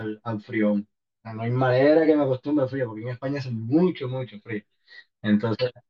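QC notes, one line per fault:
Throughout, channel delay (comb filtering): one channel runs around 10 ms behind the other, so the mono sum cancels at evenly spaced frequencies starting near 50 Hz, leaving the speech hollow and phasey. Unlike flanging, these notches stay fixed and never sweep.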